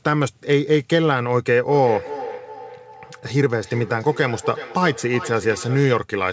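Speech over a call, and from 1.68 s to 6.09 s there's a feedback echo between two devices: each phrase comes back roughly every 0.4 s, peaking about 12 dB below the voice, thinner and ringier each time. Two devices in the same room are likely feeding each other, and neither echo canceller removes the other device's playback. The sound tops out at 8 kHz, which fits G.722.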